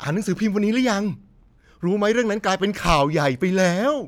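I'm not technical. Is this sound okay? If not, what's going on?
Yes, it sounds fine, with nothing going wrong anywhere in the recording.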